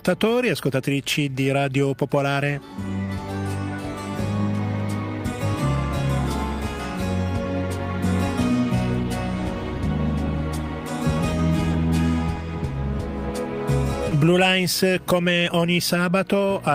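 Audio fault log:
3.05–3.09 s, 11.71–11.75 s, 14.09–14.13 s: short concealed packet loss. Each time about 20 ms of audio arrived too late, so the decoder extended the preceding sound and blended back in, leaving a brief smear or wobble.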